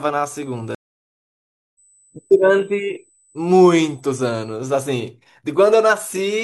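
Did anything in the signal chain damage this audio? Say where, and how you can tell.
Yes. Current drawn by the USB bus in 125-microsecond microframes leaked into the analogue power or ground wiring, producing USB whine: a steady 8 kHz tone around 40 dB below the speech, running from 0.36 s to 4.57 s at a fixed pitch.

At the network stage, the connection dropped and the player had to reconnect, a stream reconnect. The audio goes silent for 1.0 s, from 0.75 s to 1.79 s, then resumes with a fresh decoder about a second further into the stream, so that stretch of speech is skipped.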